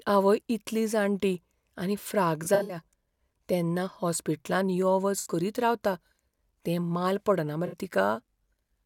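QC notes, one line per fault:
2.44–2.77 s, AAC frame loss with concealment: about 150 ms of gaps scattered across 0.26 s, longest near 70 ms, filled from the last good spectrum, giving smeared, phasey patches.
5.19–5.28 s, AAC frame loss with concealment: after "तेन्ना हॉस्पिटलांत यो", a 64 ms hole is patched by the decoder from prior spectrum, heard as a brief noisy smear before "करीत रावता".
7.66–7.75 s, AAC frame loss with concealment: a 64 ms dropout, consistent with a few lost frames, is concealed by repeating stale spectral content, producing a short smeared, phasey blur.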